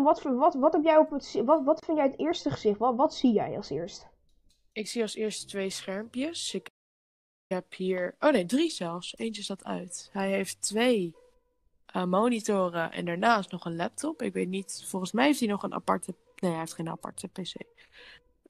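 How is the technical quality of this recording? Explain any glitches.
One glitch stands out: a playback stall from 6.68 to 7.52 s. The sound cuts off mid-flow and stays silent for about 0.82 s, likely because the player ran short of data or its thread was blocked. Unlike a natural pause, the silence begins abruptly with no decay, and it lasts far longer than a brief dropout click.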